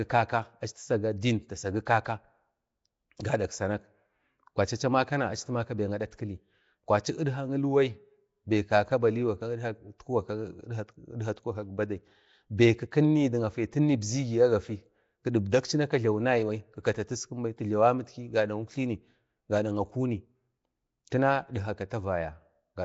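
Throughout, the speech sounds hissy and smeared, almost underwater, with nothing above 7.7 kHz. This is likely Nellymoser compression filling bit-starved bands with noise.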